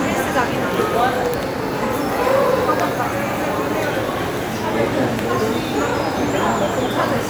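No technical fault can be heard anywhere in this recording of sounds, and the signal holds steady throughout.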